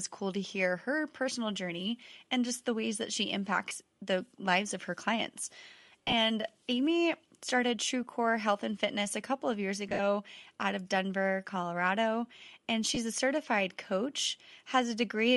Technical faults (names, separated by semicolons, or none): Bluetooth LC3 compression; lost LE Audio frames